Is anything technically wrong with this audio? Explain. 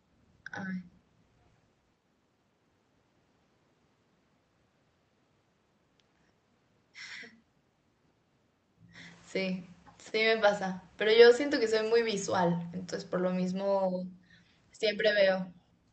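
Yes, there's one real problem. From 11.05 to 13.89 s the automatic gain falling kicks in: the gain control judged the input too hot or its background noise too strong and eased its gain down by about 3 dB, so the speech and the room noise behind it sink together. The level shifts around 1.5 and 8.5 s are just the talker moving.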